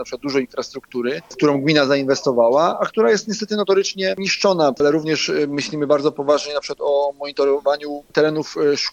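From 5.40 s to 7.55 s the audio shows a Bluetooth SBC bit pool drop. The encoder on the link was starved of bits, so the highest sub-bands lost their allocation and the remaining bands were quantised coarsely. The treble goes dull and a gritty, grainy noise sits over the sound. This fits a fall from a bit pool of 31 to about 13, near 94 kbps. Normal clarity returns once the rate recovers at 7.55 s.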